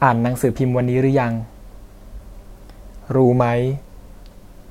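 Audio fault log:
3.25 to 4.71 s, drift correction step: at 3.25 s the speech abruptly slows by about 5.9% and drops roughly a semitone (105 cents), with speed and pitch shifting together as if playback were dragged, and it stays that way to the end of the clip. The likely cause is clock-matching software changing its playback rate in a single jump to refill its buffer, which shows up as this sudden detuning instead of a gradual, inaudible adjustment.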